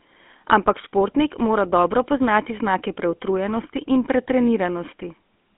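The clip is speech passed through the GSM full-rate codec for its whole length. The codec models the vocal tract and excites it with a coarse, regularly spaced pulse train, so the voice carries a plainly audible buzzy, gravelly roughness. Nothing sounds above about 3.8 kHz, and the band sits on a 200 Hz to 3.4 kHz telephone line. The texture fits a 13 kbps full-rate coding.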